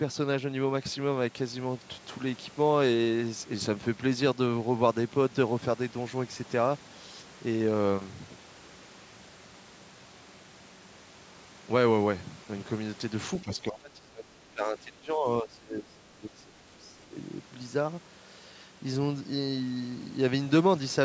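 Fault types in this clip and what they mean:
Speech suppressed in double talk: the speech sinks by up to about 20 dB from 13.42 to 16.53 s, then dips about 10 dB from 16.78 to 17.16 s. This is likely an echo canceller mistaking overlapping talk for loudspeaker echo and attenuating both.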